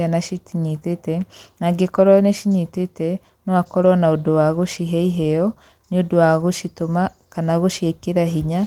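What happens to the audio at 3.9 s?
At 3.85 to 3.87 s, just before "na ũndũ wa gũcihe", a lost packet was rebuilt from error correction. The decoder played the low-bitrate copy carried in the next packet, so there is no gap, just a brief rougher, noisier patch. The waveform stays continuous, and the spectrogram shows a 20 ms smear of grainier texture.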